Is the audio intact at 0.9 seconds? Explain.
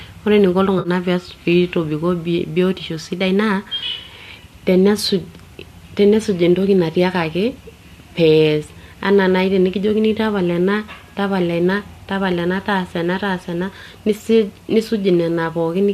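No. AAC frame loss with concealment spans 0.79 to 0.89 s: roughly 60 ms of lost audio was filled in by reusing the last good spectrum with scrambled or interpolated detail. That gives a smeared, noisy patch, seen as blurred harmonics on a spectrogram, with 0.9 s at its recovery edge.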